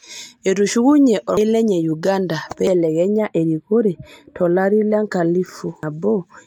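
Speech, with compressed frames skipped at 1.37 s, 2.67 s and 5.83 s. Each time the audio jumps forward, roughly 300 ms at the first point and about 200 ms at the other two, which fits two or three missing frames of 92.9 ms. From 3.18 s to 4.90 s, channel delay causes comb filtering. One channel trails the other by about 0.07 ms, which fits a lag of a few samples, and the mono sum cancels at regularly spaced frequencies, with the first notch around 7 kHz. That section sounds hollow and phasey.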